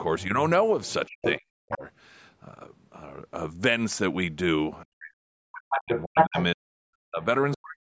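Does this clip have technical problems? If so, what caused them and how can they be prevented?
Yes. Other side's voice leaking through: a second voice sits under or over the speech at 0.19–1.77 s (about 5 dB below), 5.59–6.44 s (about 5 dB above) and 7.22–7.57 s (about 25 dB below). On a spectrogram it appears as a second set of harmonic stripes crossing the main voice's. The likely cause is an echo canceller leaving loudspeaker sound in the microphone. Headphones, or a canceller tuned for that device's speaker path, would prevent it.

Speech suppressed in double talk: from 1.07 to 1.82 s and from 4.84 to 7.78 s the voice dips by as much as about 40 dB, affecting about half a second and then about two seconds in total. A waveform shows the envelope collapsing into gaps, and a spectrogram shows the harmonics fading or vanishing. The likely cause is an echo canceller that turned this side down with the loudspeaker echo while both sides talked. 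Better double-talk detection or headphones would prevent it.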